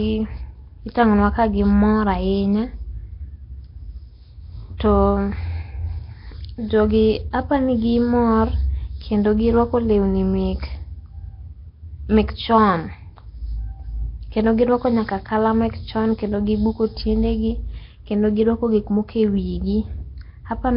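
From start to finish the speech carries heavy codec damage, with a rough, hissy halo around it and a smeared, underwater quality. That points to Nellymoser compression, likely from the old Flash microphone codec, whose fixed bit budget fits roughly 22 kbps. Quiet bands starved of bits come back as noise fill, which sets it apart from the swirly, warbling artefacts of low-rate MP3. Nothing remains above about 5.3 kHz.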